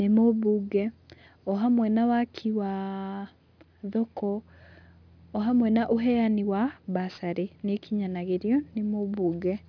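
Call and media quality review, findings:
Aliasing, whole clip. Sibilants gritty and metallic, with faint folded tones well below the speech level. Probable component: a resampler with no anti-alias filter. Energy above 5.5 kHz mirrors back down into the band, which fits a drop from 44.1 kHz to 11 kHz. This differs from plain band-limiting, where the top is dull and clean. Here the spectrum runs hard up to the 5.5 kHz edge, and the added pitches don't track the speech harmonics.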